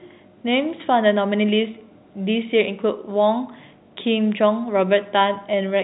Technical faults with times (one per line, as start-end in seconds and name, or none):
none